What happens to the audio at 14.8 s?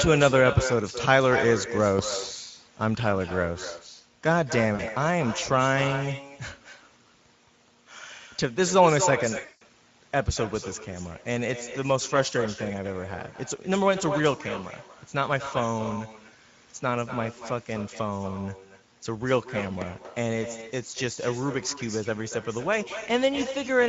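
At 14.8 s the speech carries two faults, and neither is confined to that moment; both run through the whole clip. The first is echo with no canceller. The far end's loudspeaker feeds its microphone, and nothing strips that out, so each phrase returns about a fifth of a second later, roughly 10 dB down and thinner. Room reverberation would smear continuously from the onset. This copy arrives as a distinct, delayed repeat, most obvious after syllables end.

The second is Speex codec damage, plainly audible here. Speex is a CELP coder, so it models the voice and spends limited bits on the excitation signal. Starved that way, the speech turns grainy and hoarse. The top of the band sounds like shaped hiss rather than real detail. Unlike broadband background noise, that roughness is welded to the voice and disappears in pauses.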